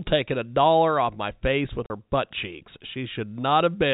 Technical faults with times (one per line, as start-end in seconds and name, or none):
1.86-1.90 packet loss filled with silence